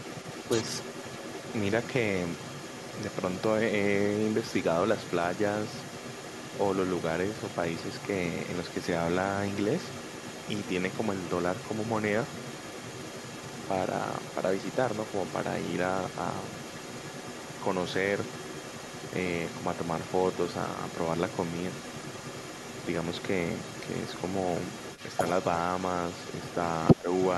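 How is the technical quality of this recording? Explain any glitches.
The recording has two echo-related faults.

Throughout, from 0.0 to 27.37 s, there is other side's voice leaking through: a faint second voice, about 15 dB below the talker, likely loudspeaker echo the canceller missed. On a spectrogram it shows as a weaker, overlapping harmonic pattern.

From 26.94 to 27.07 s there is speech suppressed in double talk: the talker's level briefly sags by roughly 15 dB, likely as the canceller clamps both voices. The waveform visibly narrows for that short stretch.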